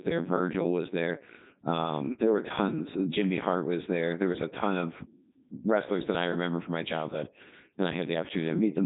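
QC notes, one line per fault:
Throughout: Codec 2 vocoder. Speech is resynthesised from sine waves, so it sounds robotic and buzzy. This fits a 3.2 kbit/s mode, and the spectrogram shows nothing above 3.8 kHz.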